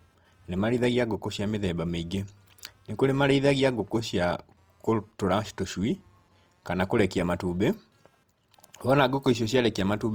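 Right from the start and running the whole way through, there's computer activity noise under the speech: a faint buzzy chirping pulsing at around 200 Hz, sitting roughly 40 dB down. It's processor or graphics load pulling on the shared ground, so it follows the machine, not the talking.

Also present throughout is plainly audible grainy roughness on the speech. The top end is still there, up to about 20.2 kHz, but voiced sounds come out noisy and coarse. That's likely Opus compression in its music mode, filling starved bands with noise at a bitrate around 24 kbps.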